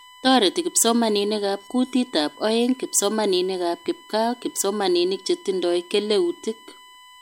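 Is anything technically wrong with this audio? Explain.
Yes. USB whine runs through the whole clip: the bus's 1 ms frame timing draws current in pulses that leak into the audio through shared power or ground, leaving a steady, fixed-pitch 1 kHz whine sitting about 25 dB below the speech.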